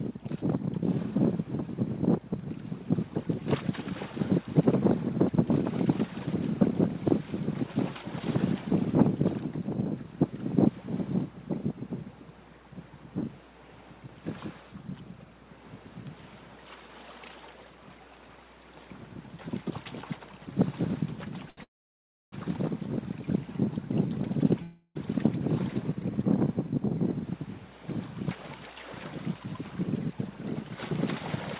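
Audio carried over a narrowband call path, with nothing above 4 kHz, which fits G.711 mu-law at 64 kbps. At 21.5 s a short stall from a late packet holds the last sound for 72 ms, a brief smear rather than a silence, and nothing is lost. A call audio freeze follows from 21.63 to 22.34 s, likely from packets held up in transit. The sound fades into 640 ms of silence before resuming, which separates it from the brief stall. A second freeze at 24.62 to 24.97 s stretches the sound with a fading buzz or hiss that barely reaches silence. From 28.35 s to the end, jitter buffer speed-up plays the audio at about 106% speed, trimming roughly a fifth of a second. It sounds hurried, but the pitch stays put, unlike a plain playback-rate change.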